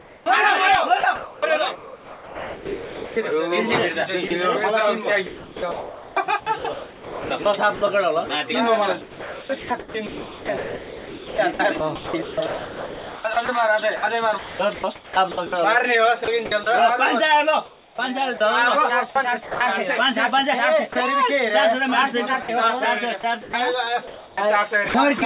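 From 0.00 to 3.17 s the sound is chopped by the voice detector, likely because the sender's detector kept switching transmission on and off. About 2.0 s of this stretch is replaced by comfort noise, so the audio stutters. On a waveform, the real sound breaks into blocks separated by low, even-amplitude noise. On a spectrogram, the fine detail gives way to featureless smears that stop below 4 kHz, the band limit of this G.711-style call path.

From 4.28 to 4.31 s there is a brief drop, likely the detector mistaking a quiet moment for background and halting transmission. About 20 ms of sound is lost and 30 ms of comfort noise takes its place, heard as a tiny dull gap. It shows as a thin notch of uniform noise in the waveform and a narrow smooth column in the spectrogram.

The chopping returns from 5.27 to 16.67 s, the longest stretch, with about 5.7 s replaced. Further bursts follow from 17.66 to 19.61 s and from 22.43 to 25.22 s, with about 0.6 s replaced in each. 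Both views show the same alternating pattern of real and synthetic blocks, likely from the same detector switching.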